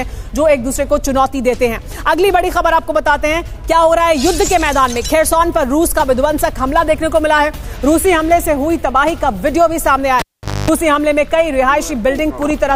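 At about 10.19 s a cable gets pulled and plugged in: pop, roughly 0.46 s of near-silence, a 250 ms, 50 Hz mains buzz, another pop by 10.71 s.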